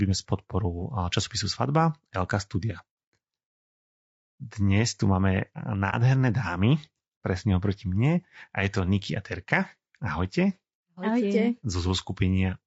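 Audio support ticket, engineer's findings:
Low-delay AAC compression throughout: rough, grainy speech, noise filling gaps between harmonics, thin, synthetic-sounding top band. Likely AAC-ELD, short frames resolving pitch harmonics poorly, bit budget stretched; damage plainly audible, consistent with roughly 32 kbps.

AAC frame loss with muting, 5.90–5.94 s, after "tu máme", before "dámy presne oproti mne": soft-edged dropout, about 30 ms. Decoder zeroed the lost spectrum; overlapping windows faded out and back in. Consistent with a single lost frame.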